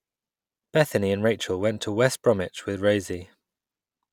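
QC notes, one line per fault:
No technical faults heard.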